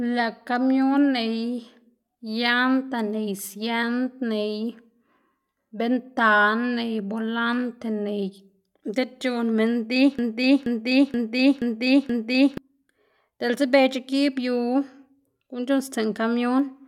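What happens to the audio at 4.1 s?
Nothing goes wrong at 4.1 s; the speech there plays through intact, with no dropout, click or distortion.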